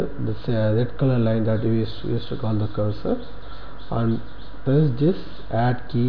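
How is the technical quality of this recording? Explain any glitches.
The recording shows no technical faults. There is nothing here that needs explaining.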